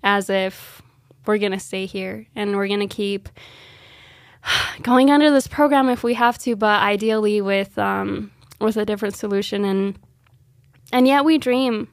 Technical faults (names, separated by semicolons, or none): none